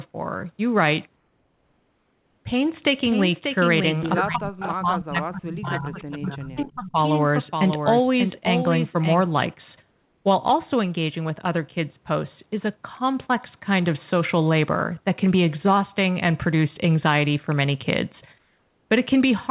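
From 1.16 to 2.45 s, the real background drops out. A steady, featureless hiss takes its place. That hiss is about 3 dB quieter than the room sound it replaces. This is comfort noise in place of the background. The likely cause is discontinuous transmission. The sender stopped sending during the pause, and the receiver filled it with synthetic noise. The shaped hiss fits RFC 3389 comfort noise. The background sits about 46 dB below the loudest speech.

From 4.24 to 6.98 s, the speech is suppressed in double talk. The voice dips and breaks into pieces. Its deepest drop is around 35 dB. The affected parts add up to roughly two seconds. Both sides were likely talking at once. The echo canceller could not tell its own talker from the loudspeaker echo. So it turned everything down.

Inside that stretch there are three echo leaks. The first is at 4.6 to 4.71 s, a copy 310 ms late and around 10 dB below the speech. 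The second is at 6.0 to 6.11 s, also 310 ms late but fainter, around 25 dB down. The third is at 6.57 to 6.71 s, 341 ms late, again around 25 dB down. Each is a short scrap of delayed voice. The likely cause is a loudspeaker on one side of the call, with its canceller letting part of the pickup through.

The same flat hiss replaces the background twice more. It runs from 9.92 to 10.25 s and from 18.38 to 18.89 s. Each time it is about 2 dB quieter than the real background.

Throughout, nothing is heard above 4 kHz. That fits the narrowband G.711 mu-law codec at 64 kbps on this call path.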